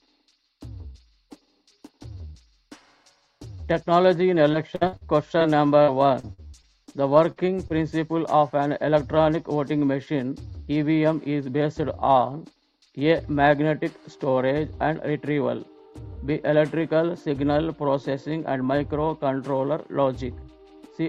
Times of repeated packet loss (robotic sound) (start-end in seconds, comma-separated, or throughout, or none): 4.51-5.03, 5.82-6.89